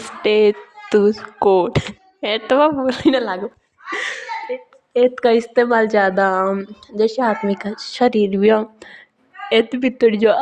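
No technical faults can be heard anywhere in the recording; the speech signal stays continuous and stable throughout.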